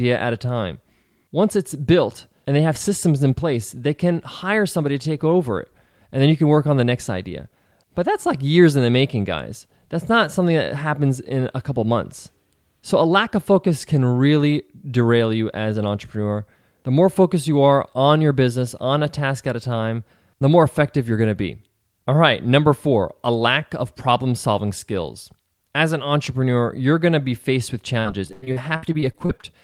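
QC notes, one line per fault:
27.99–29.45 s, repeated packet loss (robotic sound): right after "to be faced with", the speech breaks up into a dozen or so short dropouts, the longest about 100 ms. The concealer patches each one by stretching the last sound, so about 30% is synthetic filler, giving choppy speech with pieces missing.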